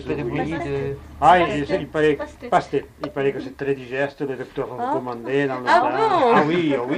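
No technical faults are audible in this audio.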